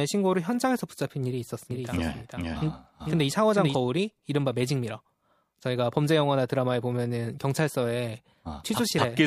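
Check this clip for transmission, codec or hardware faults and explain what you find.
One fault stands out in the speech. From 1.71 to 3.75 s there is a doubled audio track. A dry copy, likely from a slower capture path, trails half a second behind at about 5 dB quieter. It starts and stops abruptly.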